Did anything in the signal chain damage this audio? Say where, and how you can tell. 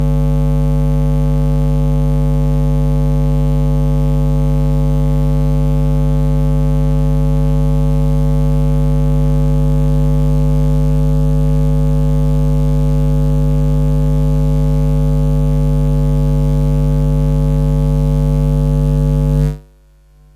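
No, nothing in this sound stood out on listening that would point to damage at any stage of the signal chain.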